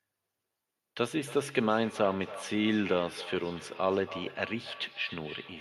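A second device in the same room is on the call and playing back what this microphone sent, and that microphone picks the playback up again; its echo canceller only removes its own device's output, so the loop goes unchecked. This feedback echo between two devices runs from 1.24 s to the end of the speech clip, with each word returning roughly a third of a second later, thinner and ringing, at about 15 dB below the speech.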